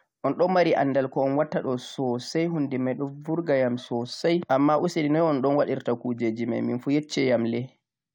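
No technical faults are audible.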